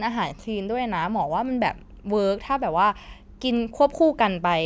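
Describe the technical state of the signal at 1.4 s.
At 1.4 s the speech signal is intact, with no audible fault at that point.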